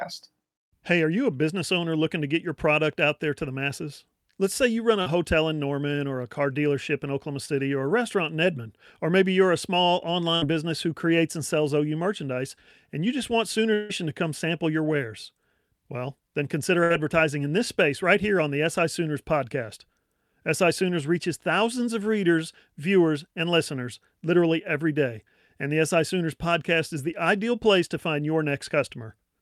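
At 5.01 to 5.08 s, between "say you run" and "hotel in", a short concealed packet loss leaves a brief smear. About 40 ms never arrived. The receiver stretched the last sound to cover it. At 7.46 to 7.50 s, just before "or a restaurant in", a 20 ms gap gives a brief wobble.

At 10.36 to 10.44 s, after "maybe you're a small" and before "business who creates and", a burst of packet loss removes 60 ms. The last sound is held and fades, then the audio resumes further on.

At 13.74 to 13.91 s, the sound freezes into a held, fading continuation for about 160 ms, with no true silence. It then jumps ahead with material missing. The likely cause is a long network dropout.

At 16.83 to 16.92 s, another burst of packet loss drops 60 ms. It is filled with a decaying continuation of the last sound.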